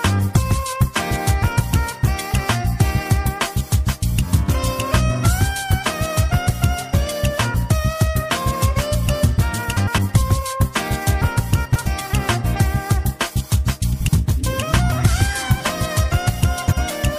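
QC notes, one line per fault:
9.77–9.99 s, 11.65–11.87 s, 13.93–14.09 s, 16.66–16.78 s: frames out of order. Each stretch plays with its two halves swapped. The swapped blocks are about 105 ms, 105 ms, 78 ms and 52 ms long. That fits neighbouring runs of four, four, three and two frames decoded in the wrong sequence. The sound turns into a brief garbled flutter. No time is lost.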